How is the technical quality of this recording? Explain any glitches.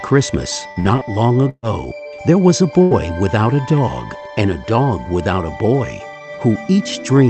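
The recording has three glitches, all from lost network packets on an Opus call path whose audio stops around 8 kHz.

From 0.71 to 1.67 s there is repeated packet loss, giving a robotic sound. Four gaps, the longest 133 ms, were each papered over by extending the previous sound. About 200 ms of real audio is missing, and roughly a quarter of the stretch is synthetic fill, so it sounds choppy.

From 2.83 to 2.94 s comes a burst of packet loss. About 80 ms vanished in one run. The receiver held the last sound and faded it, so the sound turns into a sustained buzz or thinning hiss, then jumps ahead past the missing piece.

From 2.91 to 2.95 s, overlapping the end of that burst, a 40 ms lost packet was rebuilt from error correction. Opus forward error correction supplied a low-bitrate copy from the following packet, so there is no hole, just a brief rougher, noisier patch.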